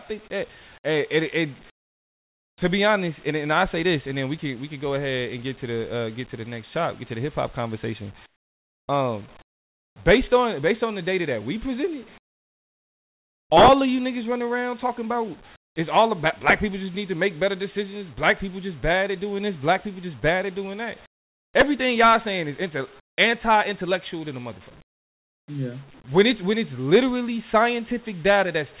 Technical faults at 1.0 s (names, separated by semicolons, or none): none